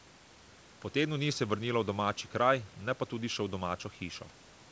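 No technical faults are audible.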